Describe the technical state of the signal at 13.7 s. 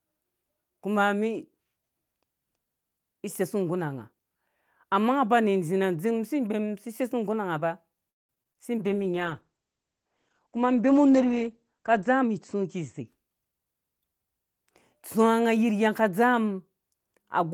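At 13.7 s the speech is still inside a jitter buffer speed-up running from about 12.07 to 13.82 s. The receiver, holding more audio than it targets, repeatedly cut out single or few pitch periods, shortening the passage by about 150 ms so it plays at roughly 108% speed. Pitch is unchanged, but delivery sounds hurried. A spectrogram shows harmonics at normal spacing with syllables squeezed in time; the waveform shows periodic cycles spliced out.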